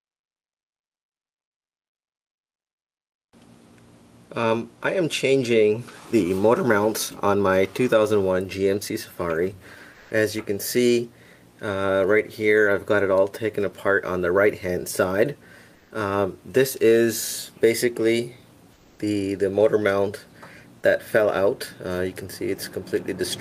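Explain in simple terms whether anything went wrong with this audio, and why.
Comfort noise in place of the background appears three times: 9.93 to 10.11 s, 15.75 to 15.91 s, and 18.73 to 18.99 s. For a fifth of a second or so, the real background becomes a smooth, featureless hiss, likely because the sender paused transmission. Unlike a dropout, it never goes silent.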